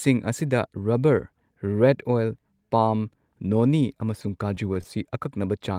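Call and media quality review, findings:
Scattered short gaps, 4.22–5.05 s, right after "ꯄꯥꯝ ꯅꯣꯅꯤ". Speech stays intelligible but has about seven brief ticks and smears, none longer than roughly 10 ms, about 70 ms concealed in total (around 7% of the span). Jitter buffer / packet loss concealment in the receive path: lost or late packets patched by extending the preceding sound. Some 9 ms was dropped outright rather than filled.

Short concealed packet loss, 5.59–5.61 s. A single brief smear or wobble near the end of the clip. Decoder PLC: 10 ms of audio arrived too late or not at all. The receiver synthesised 10 ms as a continuation of the last signal and cross-faded back into the real stream. Any short consonant in that slot may be softened or lost.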